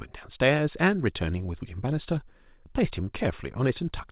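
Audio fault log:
No fault in this speech clip.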